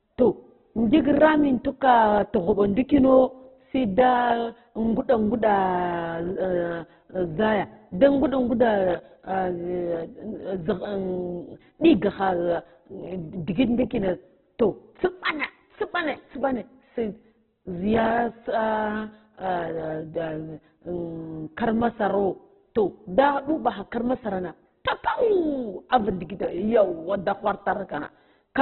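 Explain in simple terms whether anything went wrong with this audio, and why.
Heavy squeezing of the file, most likely Opus compression at a very low data rate, has thrown away everything above 4.2 kHz. The speech therefore sounds muffled and narrow, like a phone line, with a rough, grainy texture throughout.

At 25.90 s, just after "kar masarna papau", a pre-echo occurs: the compressor spread its noise across a short block, so a brief hiss of about 14 ms arrives just before a sharp sound, making that attack seem soft and smeared.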